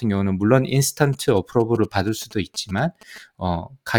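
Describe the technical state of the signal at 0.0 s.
At 0.0 s the speech signal is intact, with no technical fault present at that moment.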